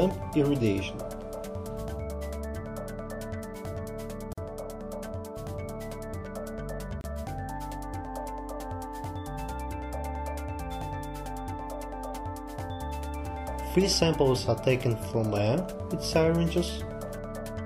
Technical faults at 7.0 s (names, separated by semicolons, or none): gap at a join of encoded pieces